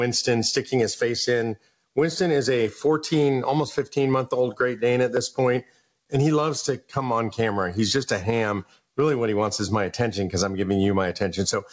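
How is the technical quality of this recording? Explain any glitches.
The recording suffers from gain pumping throughout, and it comes through a wideband call path with nothing above 8 kHz.

Gain pumping, throughout: the level swings by about 20 dB, likely from input gain set far too high with a fast limiter clamping it on loud sounds. The waveform looks flattened and dense.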